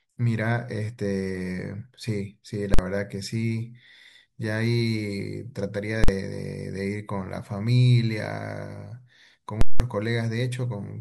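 At 2.74 s, 6.04 s and from 9.61 to 9.80 s the speech is cut by invalid numbers at full scale. A calculation produced infinite or invalid values that became the largest positive or negative value, so the output sits pinned at one extreme, far beyond the speech peaks. The first two last about 46 ms, which fits a 2048-sample block, and each is heard as a single hard bang. The third lasts about 186 ms, which fits an 8192-sample block, and splits into a loud pop at each edge with no sound between. On a waveform each appears as a flat rail far beyond the speech peaks. On a spectrogram the edges show as vertical broadband stripes.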